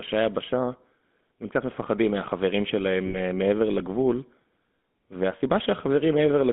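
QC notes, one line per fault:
throughout: GSM full-rate codec. The speech has a buzzy, gravelly roughness, and the band is held to roughly 200 Hz to 3.5 kHz, so it sounds thin and boxed-in. The coder models the vocal tract as a filter and excites it with a sparse train of regular pulses, keeping only one excitation sample in three. That coarse excitation is what produces the grit. The roughness and the 13 kbps-class quality fit the original full-rate GSM coder, and the damage is plainly audible.
3.06–3.18 s: lost GSM frames. For about 80 ms the speech stops moving and turns into a held, rough metallic ring, then normal speech returns. The span fits four consecutive 20 ms frames arriving corrupted. The decoder covered each missing frame by reusing the filter and excitation settings of the last good frame. Repeating one frozen spectrum produces that static, tinny ring instead of a clean gap.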